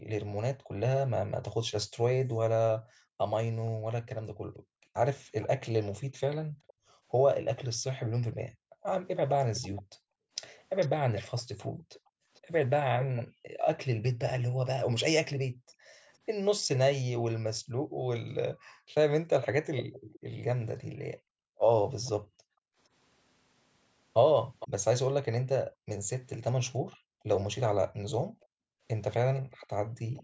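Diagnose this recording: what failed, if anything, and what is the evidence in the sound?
Background gated by the echo canceller. The stage is call processing. Across the whole clip, from 0.0 to 29.96 s, the room sound behind the speech dips and returns. The deepest drops reach about 40 dB. In total, around seven seconds are affected. The mechanism is suppression. While the far-end loudspeaker played, the echo canceller pulled the microphone down hard. The background vanished under that gain cut and came back when the canceller released.

Echo leak. The stage is again call processing, on the far side. A delayed copy of the speech sits under the main signal in three stretches: 5.41 to 13.23 s, 16.75 to 24.68 s, and 28.41 to 30.23 s. The copy trails by 445 ms in the first stretch and 459 ms in the other two. It is loudest in the middle stretch, roughly 10 dB down, and quieter elsewhere. The likely cause is an echo canceller that failed to remove loudspeaker pickup and sent the residue back.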